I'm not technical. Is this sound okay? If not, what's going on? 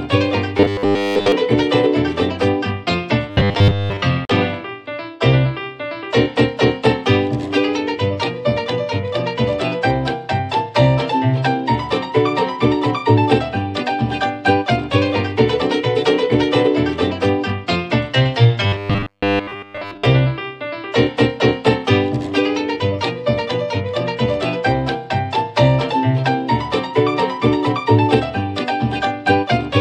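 No, not quite. In three short stretches, around 0.57 to 1.32 s, 3.30 to 4.03 s and 18.67 to 20.06 s, the audio turns into a stiff, metallic buzz humming at about 100 Hz. That's robotic sound from repeated short buffers. The likely cause is that new audio arrived too slowly, so the playback kept looping the last tiny 10 ms chunk and skipped real audio, most of it, to fill the gaps.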